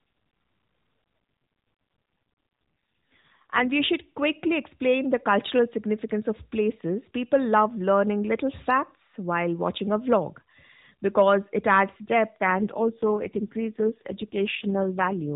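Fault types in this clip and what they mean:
AMR rate drop: From 3.12 to 3.72 s, just before "we should quickly explain", the speech turns rougher, buzzier and more synthetic, then recovers. The codec has switched to a lower mode, which fits a drop from 12.2 to about 4.75 kbps. It keeps the same 4 kHz narrowband ceiling with no gap. On a spectrogram the harmonics blur and smear within that band; the waveform stays continuous.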